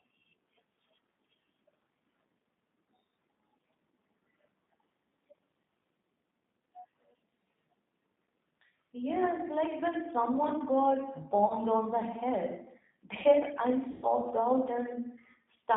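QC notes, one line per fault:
throughout: G.729 codec. The speech runs at 8 kbit/s and sits in a line band of about 200 Hz to 3.7 kHz, so it sounds thin and muffled. The coding damage is plainly audible. The codec does not send the waveform itself. It rebuilds each 10 ms frame from a vocal tract filter, a pitch predictor and a few pulses. That sparse rebuild leaves the speech rough and slightly synthetic.
11.47 to 11.54 s and 13.91 to 14.06 s: VoIP packet loss concealed by the speech codec. The first gap falls between "like when someone got" and "on the head". About 30 ms of audio is missing there, which fits one lost packet. The second gap is longer, about 120 ms, which points to several packets in a row. In both gaps the decoder repeats its last pitch and filter at falling gain, so the sound smears into a fading buzzy tone or coloured noise. Each frame is built from the one before, so the speech stays weak for a moment after the audio returns.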